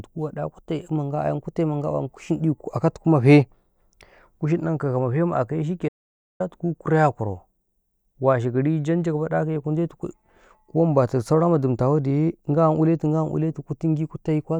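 At 5.89 s the speech cuts to complete silence for about 0.51 s, returning at 6.40 s. This audio dropout to silence likely came from a lost input link.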